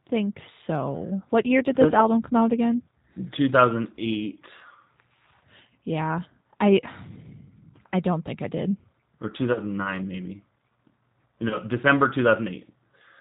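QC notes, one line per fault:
Throughout: G.729 codec. The speech is carried at 8 kbit/s, with plainly audible damage. It is rebuilt from a vocal tract model, pitch prediction and a few pulses per frame, not the waveform itself. Nothing above 4 kHz survives. Voices sound rough, thin and slightly synthetic.
9.53–9.60 s and 11.48–11.58 s: VoIP packet loss concealed by the speech codec. Each gap fits about 30 ms of lost audio. The decoder extends its last pitch and filter at falling gain, stretching the sound into a brief fading smear. Recovery lasts a little past the gap.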